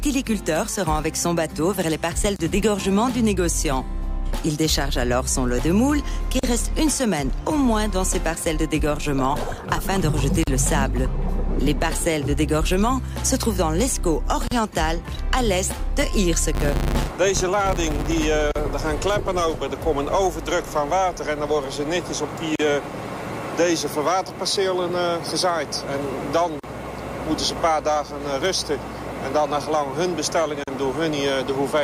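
Right from 2.36 s you get a gap at a join of encoded pieces. The sound drops out for about 31 ms, then picks up exactly where it left off. It comes back roughly every 4 s: 6.39, 10.43 and 14.47 s, each about 40 ms. Those are separately encoded chunks butted together untrimmed, so each one's start-up delay and padded final frame stay in as a hole with slightly smeared edges.

Between 16.55 and 18.26 s there's a filter restarted on every block. It drops its state at each block boundary and starts cold, so every block opens with a little transient. Together they make a 100 Hz buzz, which fits a block every 10 ms, and it gets louder and quieter along with the sound itself.

After that the join gaps carry on at the same 4 s spacing, each about 40 ms: 18.51, 22.56, 26.60 and 30.64 s.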